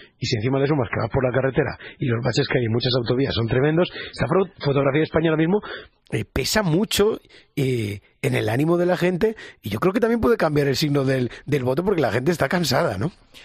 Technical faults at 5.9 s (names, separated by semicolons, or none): adaptive stream starting at a low bitrate